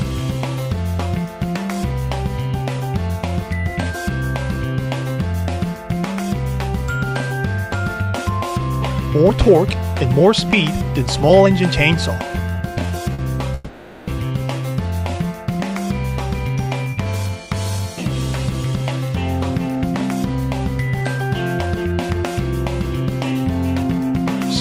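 At 13.14 s there is a short stall from a late packet. The sound is held for about 50 ms, with a slight buzz or dip. The packet arrived late and the buffer ran dry, so the last sound was stretched. Playback then resumes where it stopped.

From 13.55 to 14.11 s comes a call audio freeze. The sound turns into a fading buzz or hiss for about 530 ms, never dropping to silence. The likely cause is packets held up in transit, emptying the jitter buffer. Playback continues from the same point, with a gap inserted.

From 16.49 to 24.23 s there is a jitter buffer speed-up. The receiver had built up extra delay and trimmed it away. It cut tiny pitch-period slices, many times over. The sound runs about 4% fast at unchanged pitch, losing about a third of a second overall.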